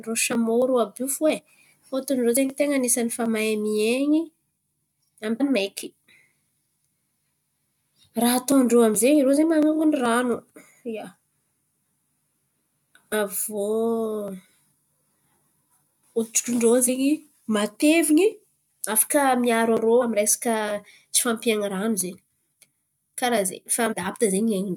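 At 5.40, 13.12, 16.87 and 20.01 s, and again from 23.91 to 23.94 s, the speech is broken by short bursts of damaged data in a compressed stream. Corrupted bytes in the coded frames make the decoder misread them and hunt for the next valid frame header, so each event comes out as a brief chirp, squawk, click or short hole.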